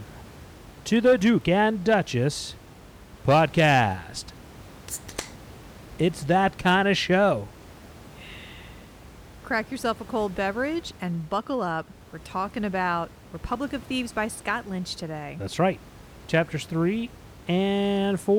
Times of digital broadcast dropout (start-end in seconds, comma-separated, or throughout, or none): none